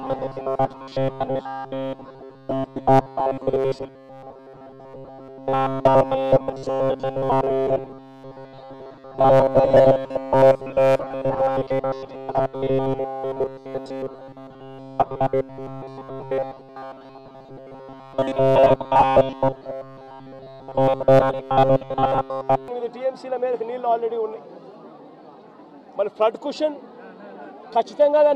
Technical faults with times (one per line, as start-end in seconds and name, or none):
0.01-22.68 robotic sound from repeated short buffers